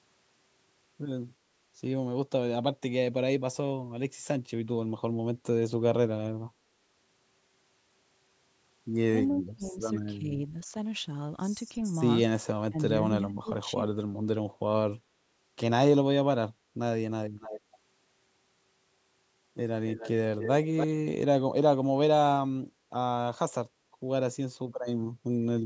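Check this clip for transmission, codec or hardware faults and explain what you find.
Two kinds of echo-cancellation fault occur in this speech.

Speech suppressed in double talk appears at 9.3–9.81 s, 10.17–10.32 s, 12.69–12.9 s and 13.21–13.74 s. The likely cause is that the echo canceller mistook the near talker for loudspeaker echo while both sides spoke and attenuated everything. The speech dips by up to about 25 dB in the first and longest gap, about 10 dB at 10.17 s, about 20 dB at 12.69 s and about 15 dB at 13.21 s, so it sounds briefly muffled or partly cut away.

An echo leak occurs at 17.4–17.61 s and again at 19.87–20.87 s. The likely cause is that the far end's canceller failed to remove all of its loudspeaker's output from its microphone, so the sound was returned. A faint copy trails the original by 284 ms. It sits about 15 dB below the speech in the short first scrap and about 10 dB below in the full second-long stretch, where it is most noticeable.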